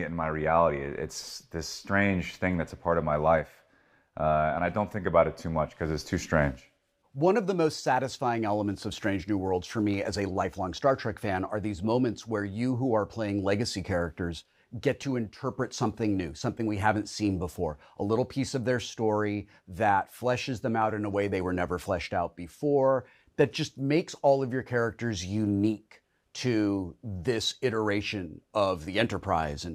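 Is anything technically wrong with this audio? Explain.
No, nothing is technically wrong with this audio.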